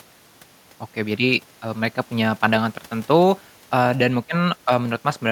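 No technical faults are audible anywhere in this speech recording.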